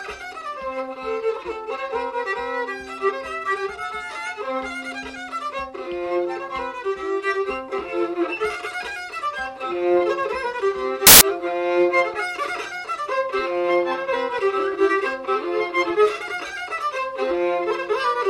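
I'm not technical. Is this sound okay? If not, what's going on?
No. At 11.07 s there is a burst of loud, harsh noise lasting about a seventh of a second. These are samples built from the wrong bytes. The player put the data together wrongly, so the tiny fast-changing details became huge, turning the sound into noise.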